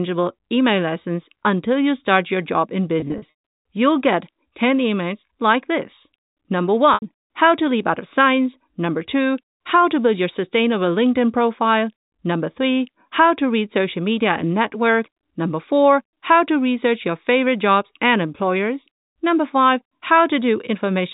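At 3.00 to 3.32 s the speech shows packet loss with pitch repetition: about 180 ms of audio goes missing in short bursts spread over 360 ms, the longest gap 60 ms. Each gap is bridged by repeating the last pitch period, so the sound turns briefly held and buzzy before resuming. At 6.94 to 7.02 s a single 80 ms loss is concealed the same way. The band-limited G.711 telephone coding underneath stays steady.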